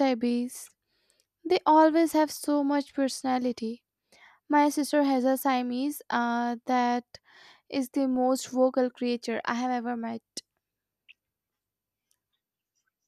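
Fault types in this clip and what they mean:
No technical faults can be heard in the speech recording: the level stays steady and the signal continues without interruption or audible damage.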